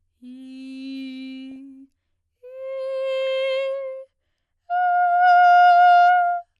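Throughout, the music sounds dull and granular, with a gurgling edge; this is likely MP2 compression, with upper sub-bands dropped at what sounds like about 80 kbps. At 1.51–1.56 s and again at 3.19–3.27 s, brief bursts of noise blips appear: DAB burbling, where a few bit errors corrupted sub-band data for two or three frames.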